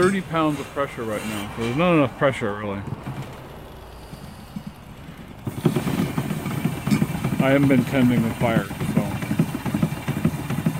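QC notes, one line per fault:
3.09–6.03 s, doubled audio track: a full-band duplicate trails the original by about a tenth of a second, about 5 dB quieter, with no decay or room colour, and starts and stops abruptly. Likely cause is a slower second capture path or an edit holding two offset copies.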